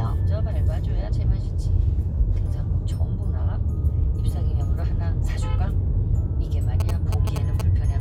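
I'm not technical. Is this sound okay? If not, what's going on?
No. From about 6.80 to 7.61 seconds there is a galloping dit-dit-dit of short buzzy bursts, somewhat quieter than the rest of the sound. These are GSM signalling bursts: a 2G mobile phone close to the recording gear sent short radio signals, as phones do just before a call or text comes in. The audio circuit picked them up and turned them into that buzz, which pulses about 217 times per second.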